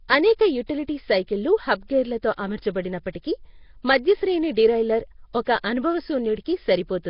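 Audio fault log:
throughout: Nellymoser compression, likely the cause of the rough, hissy halo and watery smear over the speech. Nothing sounds above 5.3 kHz, which fits a low-rate stream near 22 kbps. Weak bands are refilled with noise, so the hiss follows the speech rather than sitting steady beneath it like background noise.
0.66–0.69 s and 3.13–3.15 s: pre-echo, a brief hiss of about 28 ms and then 24 ms arriving just ahead of a sharp onset, which lands softened. The codec spread noise meant for the loud attack across the quiet moment before it, so the hiss leads the attack instead of trailing it as reverb would.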